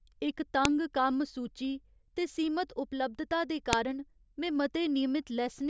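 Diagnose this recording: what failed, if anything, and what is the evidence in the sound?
Sharp, loud snaps at 0.65 s, before "कम्म सूची ते सीमत", and at 3.73 s, after "ते सीमत उपलब्धता दे". This is a storage-stage file header played as audio: joined WAV pieces kept their headers, which play as samples.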